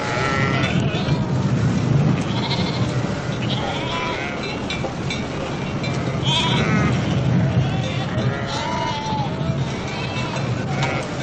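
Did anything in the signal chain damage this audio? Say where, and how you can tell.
Yes: a short glitch at 11.00 to 11.02 s points to damaged data in a compressed stream, where corrupted codec frames made the decoder lose sync.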